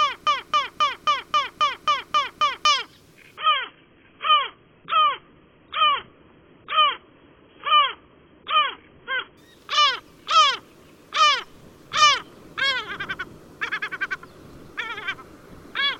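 The audio opens mid-fault with a broken-record loop. From 0 to 2.65 s, a 0.27 s fragment repeats exactly, back to back, nine times. The likely cause is a stalled player or stream resending its last buffer. The audio meant for that stretch is gone.

From 3.37 to 9.37 s, the adaptive stream plays at a lower bitrate. The treble suddenly vanishes, with nothing above 3.7 kHz, and codec artefacts rise. There is no gap at either switch. This fits a slowed connection forcing a very low-bitrate version.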